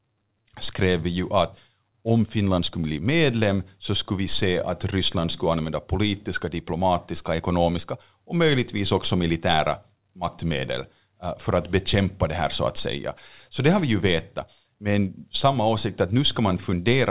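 Nothing goes wrong anywhere in this speech; it simply comes through a call line, with the sound stopping at 4 kHz in a way that fits narrowband G.711 A-law telephone coding.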